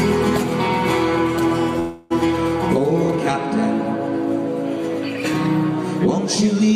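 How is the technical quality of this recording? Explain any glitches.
The recording has one glitch, a call audio freeze from 1.79 s to 2.12 s. Packets were likely held up in transit, so the receiver's jitter buffer ran dry. For about 310 ms the receiver stretched the last sound into a fading buzzy hiss that never drops to silence. When the packets arrive, the audio resumes exactly where it stopped, with nothing lost, but everything afterwards now runs 310 ms later.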